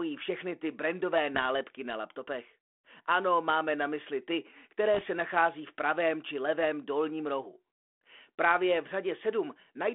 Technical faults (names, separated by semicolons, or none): bit errors on an ADPCM link